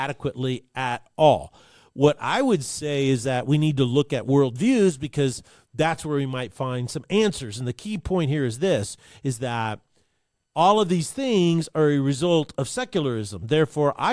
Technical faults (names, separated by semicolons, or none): none